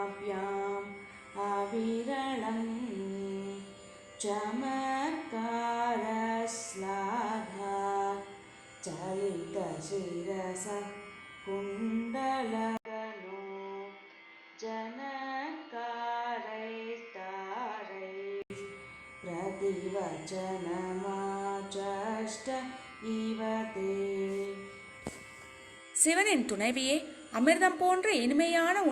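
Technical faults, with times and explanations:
1.11 to 1.14 s, corrupt frame decoded: a single damaged compressed frame was played anyway, its misread codes scattering energy into wrong frequencies for about 30 ms, giving faint added error at roughly -40 dBFS. Unlike a dropout, sound is added rather than removed.
12.77 to 18.50 s, input switched to a poorer device: after an 80 ms silence the sound turns duller and about 5 dB quieter, with nothing above 6.5 kHz and new background noise around 30 dB down, likely from a change to a lesser microphone. A codec fault would not bring fresh noise.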